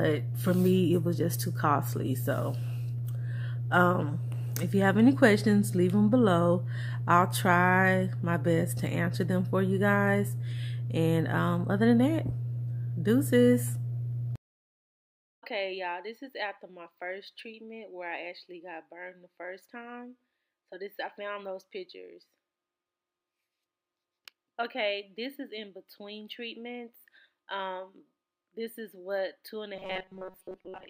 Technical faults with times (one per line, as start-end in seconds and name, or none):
29.76-30.89 robotic sound from repeated short buffers